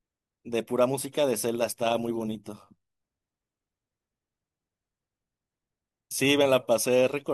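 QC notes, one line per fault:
1.54–2.89 s, overlap-add ripple. The speech takes on a metallic buzz, with extra tones around each sound. The level swings by about 6 dB roughly a hundred times a second. Overlapping frames are rejoined with windows that do not sum to a steady gain.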